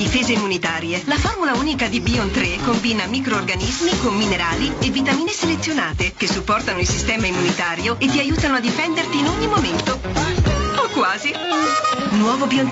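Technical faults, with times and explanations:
Throughout: gain pumping. The gain ducks by around 10 dB each time a loud sound arrives, so the level seems to breathe. Loud and soft passages sit unnaturally close together, giving a squashed, crowded feel. The likely cause is input gain set far too high for the microphone, with a fast limiter or compressor clamping down on each peak and releasing in the pauses.
3.24 to 6.72 s: sample clock jitter. A fine hiss or grainy roughness rides on the sound for these three and a half seconds. It is strongest on loud and bright moments and disappears when the sound goes quiet. The converter's clock was wandering by a microsecond or two, so samples were taken slightly early or late. Steep, fast-moving parts of the waveform turn that timing error into noise sitting around 35 dB below the signal.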